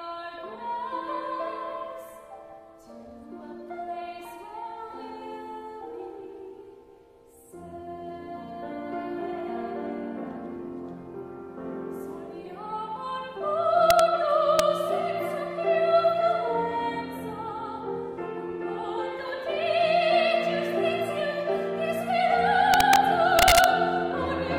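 Integer overflow cracks appear at 13.90 to 13.99 s, at 14.59 s, at 22.74 to 22.96 s and at 23.39 to 23.64 s. Loud peaks passed the largest integer value and wrapped to the opposite sign instead of being held at the limit. Each wrapped peak jumps across the whole range. The result is a violent crack, far sharper than clipping. The early pair barely exceed the limit. The late two are pushed about 1 and 2 dB over.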